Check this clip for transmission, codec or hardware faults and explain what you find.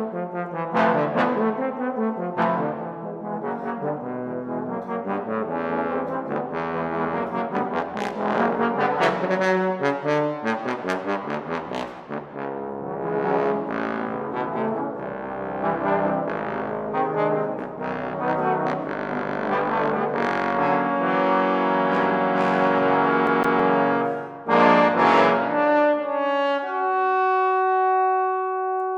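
There's one clear fault. From 23.27 to 23.60 s the CD gets stuck on one turn: a scratch keeps knocking the laser back a track, so a 163 ms slice plays twice with a tiny mute at each jump, giving that quick, even skipping-disc stutter.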